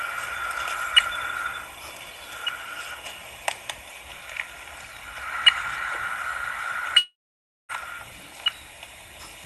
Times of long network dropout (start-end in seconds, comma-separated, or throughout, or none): 6.97-7.72